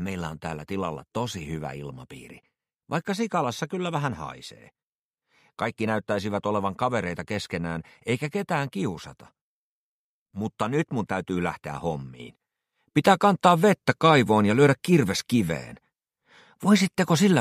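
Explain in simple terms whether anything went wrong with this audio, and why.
At 12.2 seconds everything suddenly gets louder, background included, until the end. This sudden gain jump likely came from an instantly applied volume change.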